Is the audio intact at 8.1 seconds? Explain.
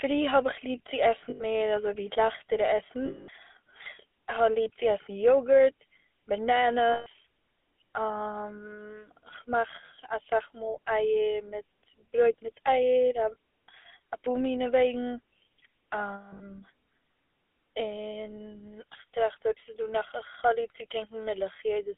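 No. At 8.1 seconds, as everywhere in the clip, the GSM full-rate codec is at work. It rebuilds speech from a vocal-tract filter fed by sparse, regularly spaced pulses, which fits a 13 kbps coding rate. That gives a plainly buzzy, gravelly roughness, and the band runs only from 250 Hz to 3.5 kHz.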